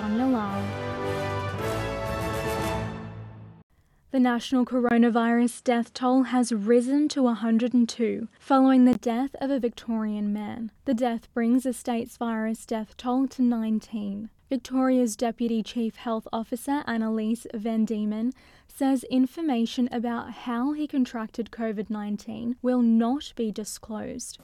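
At 4.89 s a 20 ms gap opens. Until 8.95 s the sound is duller and a few decibels different in level, over a faint new hiss, likely an input switched to a poorer device. A spectrogram shows everything above 11.4 kHz cut flat.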